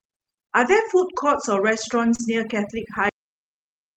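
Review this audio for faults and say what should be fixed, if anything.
Overdone noise removal runs through the whole speech recording. The reducer is set too hard. Bands near its noise estimate are pulled far down or shut off, and quiet parts of the voice go with them. The background drops and breaks up into twinkling specks. Prevent it by lowering the reduction strength and checking the result by ear.

Lost packets rebuilt from error correction appear at 0.61 to 0.71 s and at 2.19 to 2.25 s. About 60 ms and 40 ms are replaced by low-bitrate copies carried in the following packets, which fits 20 ms packets. There is no gap. Those stretches sound rougher and noisier. Prevent it by fixing packet loss on the network path.

Short concealed packet loss spans 2.15 to 2.34 s. About 40 ms never arrived in time, and 32 ms of it was filled by extending the last sound and then blending back. Roughly 10 ms of extra time was added. 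It sounds like a brief smear or wobble. Prevent it with a larger jitter buffer and a steadier connection.

A cut-off end occurs at 3.09 s. The final buffers were never written, so the audio stops in mid-sound. It drops straight to digital silence with no decay. Prevent it by flushing and closing the recorder properly before stopping.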